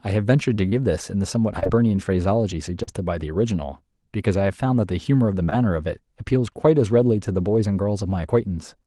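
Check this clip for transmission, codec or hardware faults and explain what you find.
The clip carries short concealed packet loss, with dropouts at 0.69–0.74 s, 1.60–1.67 s (two back-to-back gaps), 2.83–2.89 s and 5.45–5.53 s, all on speech passing through a call codec whose content stops near 12 kHz.

In each dropout, audio arrived too late for the decoder. The receiver bridged roughly 20–40 ms by extending the preceding sound, then cross-faded back. Each gap sounds like a brief smear or wobble. On a spectrogram, harmonics stretch flat or blur across the gap, and the waveform shows a repeated, smoothed cycle before the real signal resumes.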